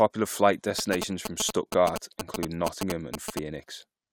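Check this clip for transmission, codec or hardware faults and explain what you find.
One fault is present: GSM signalling bursts, from 0.79 to 3.39 s. A nearby 2G phone is signalling. The audio circuit rectifies its radio bursts. The result is a galloping dit-dit-dit of short 217 Hz buzzes, roughly as loud as the speech.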